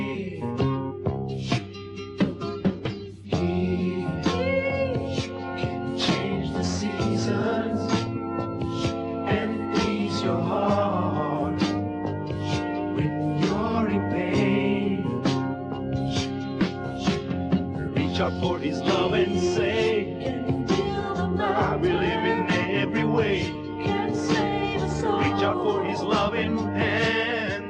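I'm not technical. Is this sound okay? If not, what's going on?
No. The whole clip sounds dull and plainly gurgly, with a grainy roughness. That is likely MP2 compression, the format used for digital radio, squeezed hard enough that the highest sounds are dropped and what remains is stored too coarsely.

From 8.00 to 8.07 s there's a brief burble. That is DAB burbling: a weak digital radio signal let a few errors slip through, so short blips of noise were put into parts of the sound for a moment.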